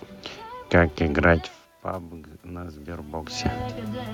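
Speech with room noise. The talker's level drops at about 1.5 s. From 1.87 to 3.40 s, automatic gain rising lifts voice and room noise together by about 5 dB.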